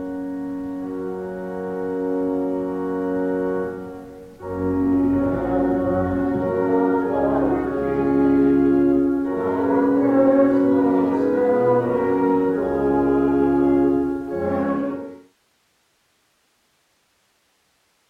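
Nothing stood out on listening, and the smooth fade-out that begins around 14.5 s and ends at 15.36 s eases the level down without any click or hard edge.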